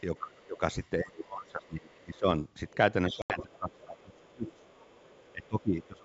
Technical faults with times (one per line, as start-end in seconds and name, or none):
0.18-0.61 speech suppressed in double talk
0.37-0.89 other side's voice leaking through
1.00-2.25 speech suppressed in double talk
1.89-2.17 other side's voice leaking through
2.68-2.76 other side's voice leaking through
3.09-4.69 speech suppressed in double talk
3.11-5.47 other side's voice leaking through
3.22-3.41 packet loss on an ADPCM call
5.32-6.04 speech suppressed in double talk